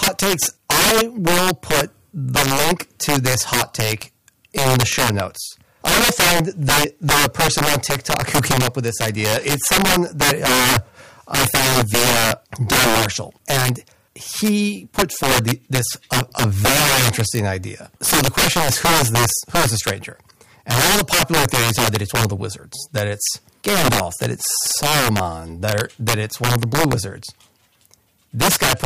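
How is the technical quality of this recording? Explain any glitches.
The technical quality is poor because of integer overflow running through the whole speech clip. The signal is driven about 11 dB past full scale, and roughly one sample in twenty lands beyond the integer limit. Instead of being held there, those values wrap around to the opposite extreme, so every loud peak snaps across the full range. This is heard as harsh, violent cracks on the louder syllables, far sharper than ordinary clipping. A waveform shows spikes jumping from the top rail straight to the bottom. A spectrogram shows bright vertical streaks of broadband energy at each of those peaks.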